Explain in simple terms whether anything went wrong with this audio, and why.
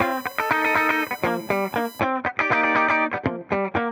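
USB whine from 0.0 to 2.0 s: a steady high-pitched tone at 1 kHz, strongest at 4 kHz, as the USB connection's 1 ms power pulses leak into the audio.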